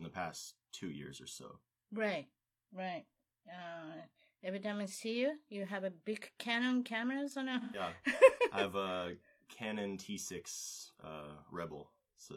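AAC frame loss with concealment hits this speech clip from 7.60 to 7.80 s. About 128 ms of coded audio is missing, which fits three dropped frames. The decoder rebuilds the gap from the last good spectrum, so that stretch sounds smeared, noisy or phasey.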